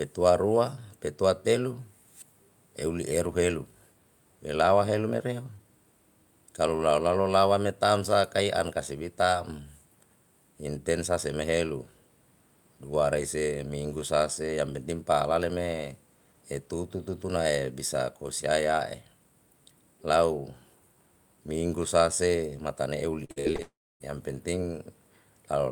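Repeated packet loss (robotic sound) runs from 23.25 to 23.60 s. Five short holes open in the speech, the longest about 52 ms. Each is patched by stretching the sound that came just before, so nearly half of this span is filled-in audio. The speech turns choppy, with small pieces missing between the patches.

At 23.62 s a continuous buzz begins, sustaining the last sound before it thins away. About 280 ms of near-silence follows, and speech resumes at 24.02 s with the intervening audio simply gone. This points to a likely long network dropout. Nothing arrived for roughly 0.4 s, the receiver carried the final fragment forward briefly, then fell quiet until the stream returned.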